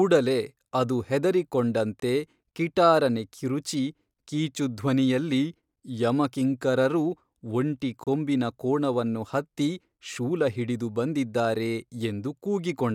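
It's a speech clip with a gap between stream segments in two places: a hard-edged hole of silence at 2.00 s, about 23 ms long, just before "ಕಿಟಾರನೆ ಕಿರುಚಿ ಕೀಚುಧ್ವನಿಯಲ್ಲಿ", and another of about 30 ms at 8.04 s, between "ಕಿಂಕರರು ಒಂಟಿ" and "ಕೊಂಬಿನ ಕೋಣವನ್ನು ಹತ್ತಿ ಶೂಲಹಿಡಿದು". They sit 6 s apart, matching the segment length. The timestamps don't quite join up, so the player pads the seam with silence. Nothing's actually lost; the audio just gets pushed later.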